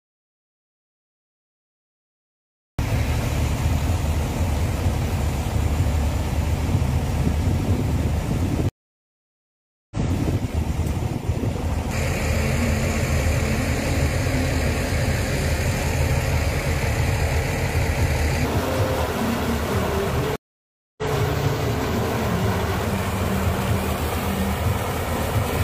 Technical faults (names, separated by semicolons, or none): audio dropout to silence; stream reconnect